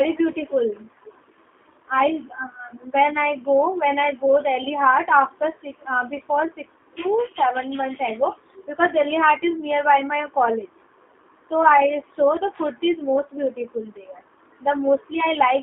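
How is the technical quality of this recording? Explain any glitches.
The quality is limited by one fault running through the whole clip: G.729 codec damage that is plainly audible on this speech. Throughout, the audio sits in a narrow 200 Hz to 3.5 kHz telephone band, and the low-rate G.729 coding, consistent with about 8 kbit/s, rebuilds speech from a vocal tract model and a few pulses per frame. The result sounds rough and slightly synthetic. A spectrogram shows a hard ceiling near 3.5 kHz and smeared harmonics.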